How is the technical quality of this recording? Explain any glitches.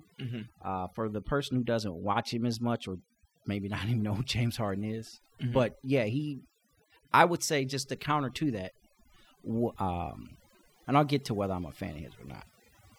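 Technical quality is compromised by overdone noise removal, present throughout the whole speech clip. A noise reduction stage was driven too hard, pulling individual frequency bands down whenever they sat close to its noise estimate, so weaker parts of the voice were cut along with the noise. The gaps fall to near silence sprinkled with twinkling specks. Plain low-pass dullness would lose only the top end, without those chirping specks.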